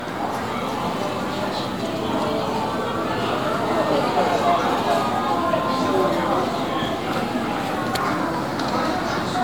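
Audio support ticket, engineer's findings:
Generation loss, throughout the full clip. Symptoms: swirly, smeared, hollow texture; transients soft and blurred; nothing above 19.9 kHz. Probable component: lossy transcode chain, sound consistent with MP3 at 128 kbit/s. Mechanism: likely repeated decode/re-encode, about seven passes, each requantising on a shifted frame grid so noise and spectral holes stack up, sounding worse than a single pass at that bitrate would.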